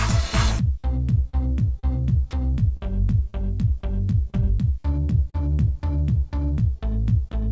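At 0.80 to 0.86 s, 1.30 to 1.35 s and 1.79 to 1.85 s there's short concealed packet loss, each time about 40 ms of audio that didn't arrive in time. The receiver bridged each hole by stretching out the last bit of sound for roughly 35 to 38 ms and then easing back into the real signal. You hear three little smears or wobbles, spaced about half a second apart.

From 2.77 s to 7.35 s there are scattered short gaps, around ten of them dotted through that stretch, none much longer than about 40 ms. Each one was patched the same way, by carrying the previous sound forward, and altogether only about 5 percent of that span is filled-in audio. So it stays largely clear, with brief hiccups and smears popping up here and there. All of this sits on a call path band-limited to nothing above 8 kHz, which points to a wideband codec like G.722.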